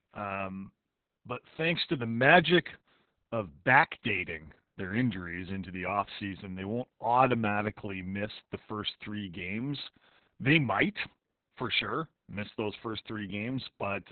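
Throughout this speech clip the voice sounds muffled, hoarse and slightly robotic, with everything above roughly 4 kHz gone and a coarse, grainy texture in the voiced sounds. This is heavy Opus voice compression: the SILK linear-prediction coder has narrowed the band to narrowband and quantised the excitation very crudely. The damage fits a bitrate around 6 kbps with long 60 ms frames, which leaves too few bits to describe the vocal detail.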